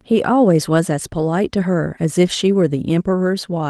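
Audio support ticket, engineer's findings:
Lost packet rebuilt from error correction, 2.21–2.27 s: 40 ms rougher, noisier patch with no gap or concealment smear; Opus low-bitrate FEC copies played, fits two 20 ms packets.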